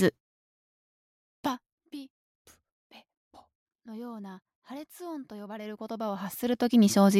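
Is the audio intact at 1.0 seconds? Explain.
Yes, the audio at 1.0 seconds is intact, with no fault to be heard at that moment.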